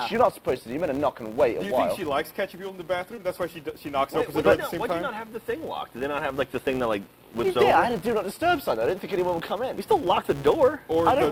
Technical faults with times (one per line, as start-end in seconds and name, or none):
0.00-11.32 filter restarted on every block
3.15-3.19 short concealed packet loss